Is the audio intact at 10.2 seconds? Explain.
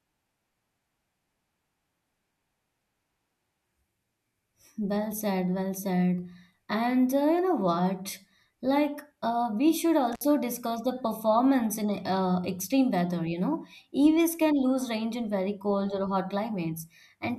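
No. An intermittent contact fault runs from 10.13 to 10.24 s, just after "uh we should" and before "discuss the performance in". A loose connection in the signal path briefly breaks, so the speech drops out for about 55 ms of open circuit. Each edge of the gap carries a short crackle as the contact opens and closes, and faint hiss remains while the line is broken.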